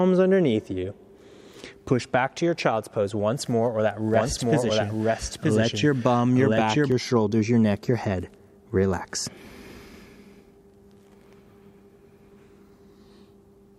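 From 4.14 s to 6.92 s a doubled audio track appears: a second full-band copy of the sound runs about a second behind the original at roughly equal loudness, likely because it was captured again through a slower path or held out of step in an edit. Unlike an echo or reverb, this copy has no decay and no room colouring, and it switches in and out abruptly at those two points rather than fading.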